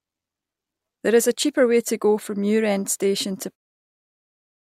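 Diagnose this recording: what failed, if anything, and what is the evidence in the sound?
Nothing failed; speech fades out smoothly by 3.57 s.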